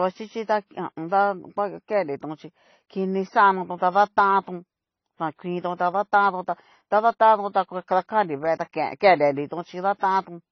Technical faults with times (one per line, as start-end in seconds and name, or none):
0.00-10.52 transcoding between lossy codecs